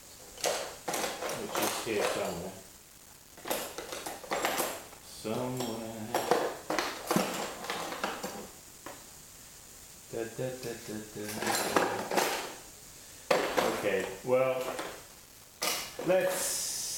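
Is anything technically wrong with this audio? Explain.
Yes. Throughout, the audio was likely reduced to a low bit depth without dither, rounded to 128 levels, which fits about 7 bits. The error tracks the signal as grainy distortion roughly 20 dB down, roughening quiet passages.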